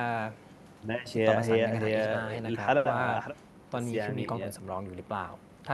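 No faults are audible in this speech; the Opus call path is working normally, with the top end stopping around 12 kHz.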